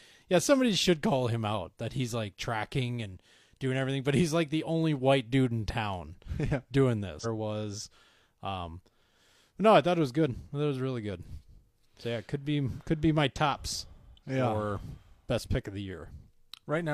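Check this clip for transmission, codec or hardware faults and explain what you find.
There is one transmission fault. Stream segment skipped, 7.20 to 7.26 s: the speech jumps ahead abruptly with a short blip, likely because one stream segment failed to load and playback continued with the next.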